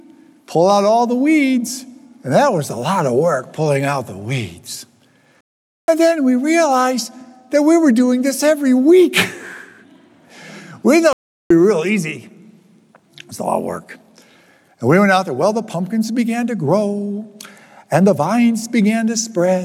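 At 5.41 s the sound cuts out for about 0.47 s, resuming at 5.88 s, and at 11.13 s it stops again for about 0.38 s until 11.50 s. These are playback stalls: output goes silent mid-flow, most likely because the player ran out of buffered data or its thread was blocked. On a waveform each shows as an abrupt flat line; a spectrogram shows a clean vertical blank band across all frequencies.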